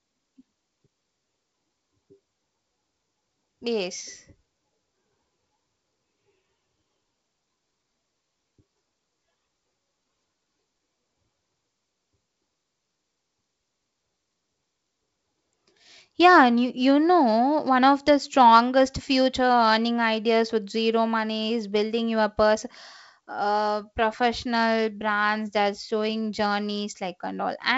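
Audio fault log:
Nothing to log here, just speech carried over G.722 wideband telephone coding at 56 kbit/s, which tops out around 7.7 kHz the way that link normally does.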